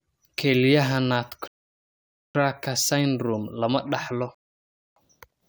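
At 1.48 s the speech halts in a rebuffering stall, silent until 2.35 s, and again from 4.35 to 4.96 s. Playback ran out of downloaded audio and waited, adding about 0.87 s and 0.62 s. Unlike a dropout, nothing is skipped; the speech resumes exactly where it stopped.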